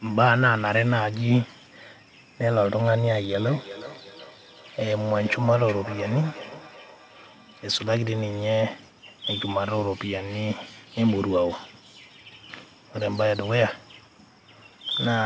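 From 3.4 to 7.97 s, a feedback echo between two devices appears: a second device in the room replays the call into a microphone whose echo canceller cannot remove it. Speech returns roughly every 400 ms, thin and ringing, peaking about 14 dB below the direct speech.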